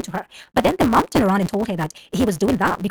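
From start to end, the speech carries a block size mismatch with truncation. One stage hands over longer blocks than the next stage takes in. The tail of every block is dropped. Those regular cuts form a buzz at about 172 Hz. That rate fits a 256-sample read. Because so much audio is discarded, the speech runs about 1.88 times too fast. Its timbre stays the same, so it sounds hurried.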